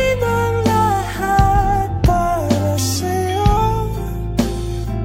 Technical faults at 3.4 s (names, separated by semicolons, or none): drift correction step